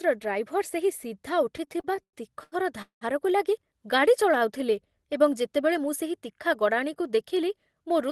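From 1.57 to 3.04 s the speech catches and drags in a series of repeated stalls (stutter). Eight times the flow halts and the last sound is held and stretched. Together these stalls add nearly half a second, about a third of that stretch, and the longest lasts 193 ms. Packets were arriving late or too slowly, so the jitter buffer kept running dry. Each time, the receiver extended what it had already played until fresh audio came in. No speech is lost, but the rhythm stumbles.

Between 4.23 and 5.05 s the speech turns slightly slow and drawn out, running at about 95% of its normal rate while the pitch stays the same. This is a jitter buffer slow-down. With its reserve running low, the receiver rebuilt it by repeating single pitch periods and small pieces of pauses many times over. That adds 46 ms across the stretch, enough to make vowels and gaps feel a little elongated.

From 7.0 s to 8.1 s the opposite happens: the speech sounds hurried, running at about 107% of its normal pace without any change in pitch. 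This jitter buffer speed-up comes from the buffer holding more audio than its target. To cut the excess delay, the receiver removed short slices of one or a few pitch periods again and again, about a tenth of a second in total, which tightens the timing toward the end.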